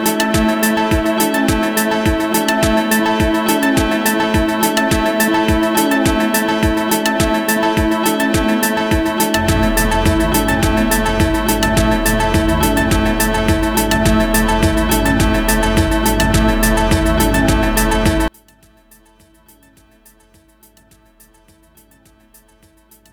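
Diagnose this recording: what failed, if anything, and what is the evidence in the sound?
From 18.28 s to the end at 23.13 s the level falls by about 35 dB, leaving only a faint residue. The likely cause is one channel inverted in the analogue wiring: with reversed polarity, everything common to both channels cancels when summed to mono.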